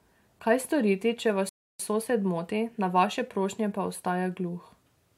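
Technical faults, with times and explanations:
1.49 to 1.80 s, rebuffering stall: the player used up its downloaded audio after "storiti če" and halted until more data arrived, so the speech cuts to silence for 0.30 s, then resumes exactly where it stopped with "sosed moti na vaše", nothing missing.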